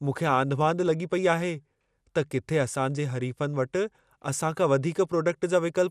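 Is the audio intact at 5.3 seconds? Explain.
No. At 5.3 seconds the speech is still dull and gurgling, as it is throughout. Nothing is heard above 14.4 kHz. The likely cause is MP2 compression at a low bitrate. Starved sub-bands switch off or get coarsely quantised, leaving granular distortion.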